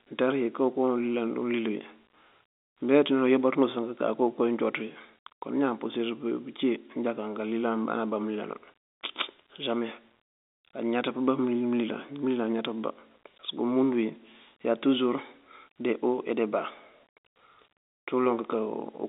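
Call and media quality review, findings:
Nothing stood out on listening to this speech over G.711 telephone coding.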